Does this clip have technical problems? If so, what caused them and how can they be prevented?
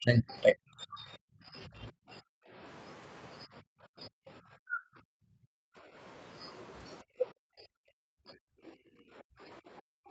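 Yes. The speech is suppressed in double talk at 0.0–2.05, 3.46–5.38, 7.18–8.38 and 9.29–10.1 s. It dips and breaks up, by as much as about 40 dB. The likely cause is an echo canceller that cannot separate the talker from loudspeaker echo. Better double-talk detection or a headset would prevent it.

The background is gated by the echo canceller at 2.21–2.54, 3.61–3.7, 5.66–5.94 and 8.66–9.01 s. The room sound drops by about 40 dB, and by about 23 dB in the last gap. It returns when the canceller releases. Gentler suppression with comfort noise would prevent it.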